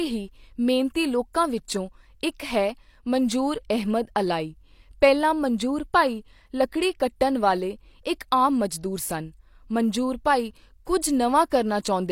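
At 11.5 s, a brief pre-echo: the codec's quantisation noise, sized for a sharp speech attack, spreads about 19 ms ahead of it as short hiss, smearing the onset.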